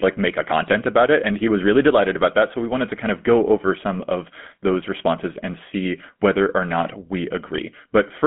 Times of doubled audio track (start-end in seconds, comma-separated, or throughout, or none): none